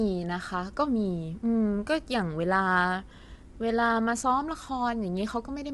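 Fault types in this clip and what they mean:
Low-delay AAC compression: throughout the speech, the voice sounds plainly rough and grainy, with nothing above about 11.5 kHz. The likely cause is AAC-ELD, the video-call codec whose short frames resolve pitch harmonics poorly. The damage fits a bitrate near 32 kbps.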